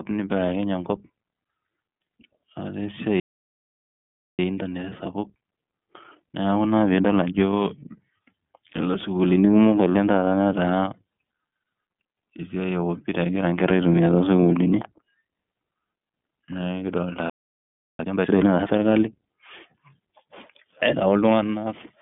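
Throughout, the speech passes through the iLBC codec, a narrowband VoIP coder that codes each frame's excitation independently of the last. The band runs from about 150 Hz to 3.5 kHz, and nothing reaches above 3.5 kHz, so the sound is boxed-in and telephone-like. The coding damage is plainly audible as a rough, slightly synthetic grain, and the frame rhythm fits iLBC's 30 ms mode at about 13.3 kbps.

At 3.20 s there is a playback stall, likely because the player ran short of data or its thread was blocked. The output falls silent mid-flow for about 1.19 s, until 4.39 s, and then resumes.

From 4.39 to 7.39 s the player works off the backlog with time-compressed catch-up. It cuts out short slices and cross-fades the remainder, so the speech runs at 1.25 times normal speed while keeping its pitch. The pace sounds hurried.

A second playback stall begins at 17.30 s and leaves a gap of about 0.69 s before the sound returns at 17.99 s.

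Catch-up follows from 17.99 to 18.67 s. This time it is faster, at 2.0 times speed, so a short stretch rushes past at double pace.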